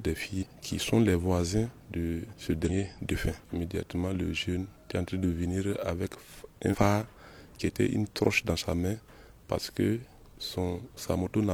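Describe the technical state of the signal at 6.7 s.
Damaged data in the compressed stream from 6.69 to 6.76 s makes the decoder lose frame sync, producing a brief corrupted chirp or blip over that span.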